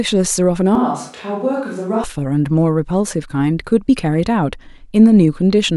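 From 0.75 to 2.04 s the speech suddenly turns roomy, hollow and bass-light, a few decibels quieter, with faint room noise: a switch to a distant microphone, likely after the close one dropped out. Unlike added reverb, the background noise changes too.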